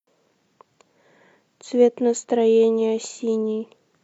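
No technical faults are audible.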